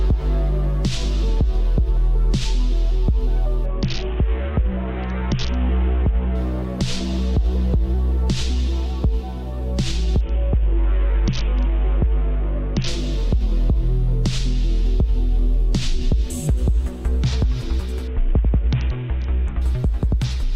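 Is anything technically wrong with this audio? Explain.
Yes. Three Bluetooth SBC bit pool drops occur, at 3.66 to 6.35 s, 10.21 to 12.88 s and 18.08 to 19.62 s. Each time the link congests and the SBC encoder's bit allocation is cut sharply, which fits a fall from a bit pool of 28 to about 6, near 60 kbps. Starved of bits, the upper sub-bands get few or no bits and the lower ones are coarsely quantised. The treble dulls and a gritty grain rises until the rate recovers.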